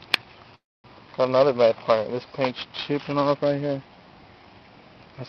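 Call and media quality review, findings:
Call audio freeze, 0.55–0.87 s. Sound stalls into a short fading buzz, then about 0.24 s of silence; resumes where it stopped, nothing lost, delay up by about 0.29 s. Likely jitter buffer underrun from held packets. Spectrogram: smeared tail, then blank gap.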